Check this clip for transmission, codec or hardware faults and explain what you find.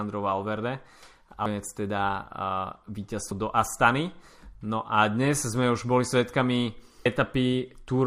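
Three brief glitches from damaged data in a compressed stream break into the speech, at 1.46 s, 3.31 s and 7.06 s. At each point the decoder hits corrupted bytes, misreads the frame, loses sync and resumes at the next valid header, so each one sounds like a sharp chirp or blip of only a few milliseconds. On a waveform each appears as a sudden discontinuity. On a spectrogram it shows as a thin vertical broadband streak.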